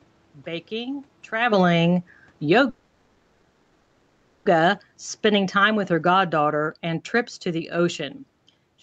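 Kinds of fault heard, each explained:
Automatic gain falling: Right after "baking traveling", around 2.36 s, the gain control finds the input too loud or its background noise too strong and eases the level down, about 8 dB by roughly 8.1 s, so the sound and its background noise sink together.
Call audio freeze: From about 2.69 to 4.47 s the sound stalls and the receiver stretches the last bit into a fading buzz for 1.76 s, likely because packets got held up and the jitter buffer ran dry. Nothing's lost; everything just resumes 1.76 s later.
Jitter buffer slow-down: Between about 5.01 and 5.19 s the receiver repeats single pitch periods to rebuild its reserve, adding 36 ms. That stretch plays at about 84% speed with the pitch unchanged, so the sound drags a little.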